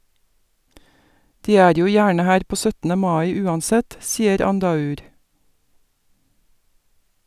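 Speech recording, no technical faults detected.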